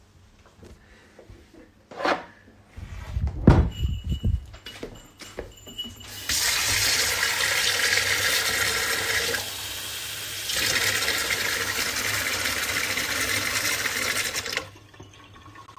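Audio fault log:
No faults heard in this recording of sounds.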